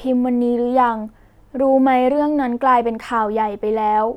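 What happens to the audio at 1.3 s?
Nothing goes wrong at 1.3 s; the speech carries on intact through that moment, with no dropout, click, glitch or other fault.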